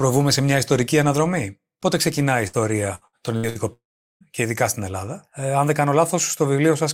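At 2.47 s the speech briefly smears into a held, fading sound for about 60 ms, then picks up again slightly further along, as though a sliver had been snipped out. This is a burst of packet loss: a short run of audio never arrived in time, so the receiver stretched the last bit of sound and faded it down to cover the hole. When playback resumed, roughly 60 ms of the original had been skipped.

From 2.95 s to 3.58 s the voice turns choppy, stuttering through four separate holes, the longest about 65 ms. This is repeated packet loss (robotic sound). Audio kept failing to arrive across this stretch, and each gap was papered over by extending the preceding sound before the next gap came. About 38 percent of the span is patched rather than real, and roughly 240 ms of speech is lost in total.

At 3.73 s the sound trails off into a brief fading smear and then goes silent for about 410 ms, with speech returning at 4.23 s. 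The whole interruption lasts around half a second, and nearly 480 ms of material never comes back. This is likely a long network dropout, where nothing reached the receiver for an extended period. It extended the last sound only briefly before giving up and leaving silence until the stream recovered.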